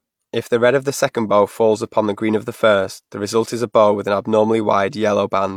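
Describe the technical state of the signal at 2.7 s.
At 2.7 s the signal is intact, with no audible dropout, clipping, distortion or other technical fault.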